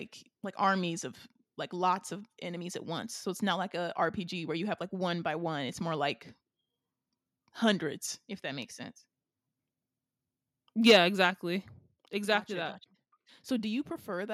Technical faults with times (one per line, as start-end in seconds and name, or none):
10.86-10.96 microphone overload
10.91 microphone volume stepped down
11.91 microphone volume stepped down